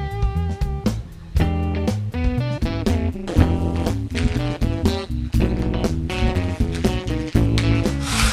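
From 2.62 s to 7.87 s there's overlap-add ripple: frames rejoin without constant gain, so level swings about 60 dB around 150 times a second, giving a metallic buzz with extra tones around each note.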